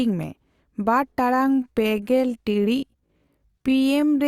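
From 1.28 s to the end, a time-stretched section slows the speech to about 0.70 times its pace, likely by repeating fragments; the pitch stays, unlike tape slowdown, and the speech drags.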